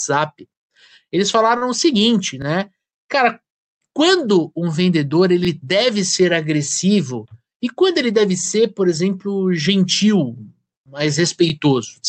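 Speech passed through a call path whose high end stops at about 8 kHz, consistent with Opus at around 32 kbps, and it carries three kinds of fault. A short stall from a late packet occurs at 1.57 to 1.64 s. A packet missed its playout time, the jitter buffer ran dry, and the receiver filled about 41 ms by stretching the preceding sound. Playback then resumed from the same point, so no audio is lost, but that sound is held audibly long, and the overall delay grows by 41 ms. Overlapping chunks produce a stutter at 2.42, 5.45, 8.47 and 11.50 s, about every 3 s. The audio was handled in 3-second blocks, and each block began 25 ms before the previous one finished, so that 25 ms plays twice at every join. The 5.45 s repeat falls between "quando um vendedor" and "deve ser", and the 11.50 s repeat follows "por exemplo gentil mais". Each join gives a small click-like doubling. A jitter buffer speed-up runs from 7.11 to 7.40 s, just before "e quando ele deve". 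The buffer had accumulated more audio than its target, so the receiver trimmed it by cutting out short pitch-period segments, around 40 ms in total. Over that span the speech plays at about 112% of normal rate at unchanged pitch and sounds noticeably rushed.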